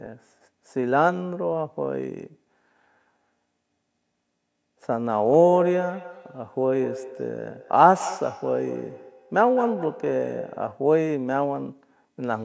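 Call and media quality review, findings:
Feedback echo between two devices, 5.42–10.89 s. Sound repeats roughly every fifth of a second, about 12 dB below speech, thinner each pass. Second device's speaker feeding the first microphone.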